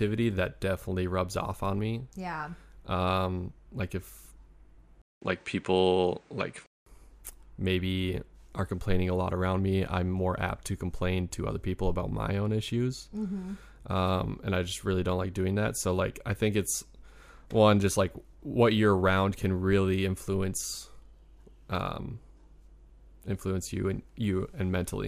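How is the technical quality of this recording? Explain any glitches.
The recording has one clear glitch in the speech. From 5.02 to 6.86 s the sound turns duller, with nothing above 9.6 kHz, a 200 ms silence at the switch, a modest level jump and a faint new noise floor, most likely an input switched to a poorer device. The gap and the changed noise, not just lost treble, set it apart from a plain filter or codec change.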